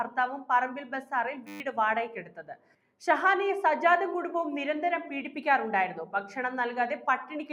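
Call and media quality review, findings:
Pumping, fluttering level throughout; held material and tails sink while attacks pass, swings around 5 dB. Noise suppressor applied to music or sounds: speech-tuned suppressor treating steady tones and decay as noise, ducking them.

Steady 100 Hz buzz, 1.47 to 1.6 s, one 10 ms fragment repeating 13 times. System hang loop: driver or host stalled while hardware kept replaying its ring buffer. Roughly 150 ms of real audio lost.

Sound sinks and its decay is cut short, 2.25 to 2.91 s, dropping by about 12 dB at the deepest, roughly half a second affected. Sound cut by the noise suppressor: sustained content misclassified as noise and attenuated below surrounding material.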